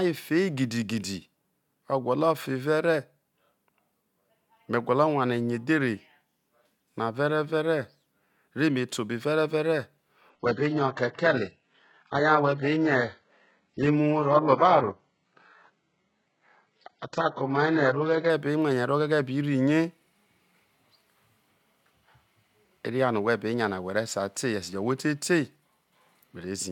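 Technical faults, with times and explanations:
10.30 to 18.30 s, adaptive stream at a lower bitrate. The speech suddenly thins, with nothing above 7.9 kHz and more codec artefacts. There is no gap. The change fits a switch from 96 kbit/s AAC to 8 kbit/s HE-AAC.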